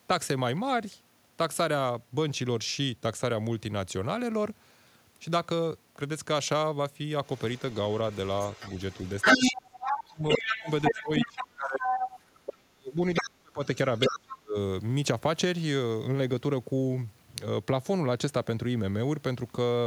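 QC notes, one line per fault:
7.24–11.31 s, 11.81–12.55 s, 13.15–13.26 s, 13.95–14.19 s: other side's voice leaking through. A second voice, roughly as loud as the talker, runs for about four seconds, then returns in shorter scraps. This is likely loudspeaker playback the echo canceller failed to remove from the microphone.
9.39–11.86 s, 12.61–13.60 s, 14.09–14.56 s: speech suppressed in double talk. The talker's level dips in pieces while the other voice is present, by roughly 25 dB, 40 dB and 35 dB, over about three seconds in total. The likely cause is the canceller attenuating both voices because it could not separate them.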